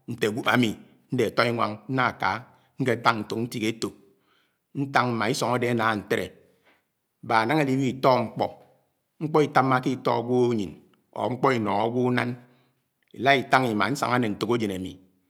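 From 2.49 to 3.09 s and again from 11.25 to 11.80 s, the speech slows about 5% and drops nearly a semitone, then snaps back: likely a drift correction step.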